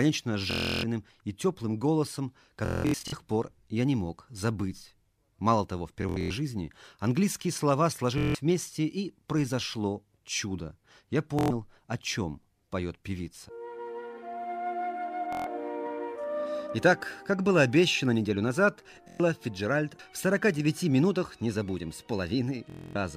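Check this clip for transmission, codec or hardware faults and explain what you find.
The clip has repeated Bluetooth stutter. Packets on the wireless link arrived late or not at all, and the receiver kept replaying its last short buffer until fresh data came. Each gap becomes a rapid machine-gun buzz of one repeated slice, after which the sound resumes further along, with the missing stretch gone. This happens at 0.51–0.84, 2.66–3.13, 6.02–6.30, 8.18–8.35, 11.39–11.50, 15.33–15.47, 19.08–19.20 and 22.70–22.96 s. The longest loss is about 0.35 s, scattered in bursts at 2.66 s.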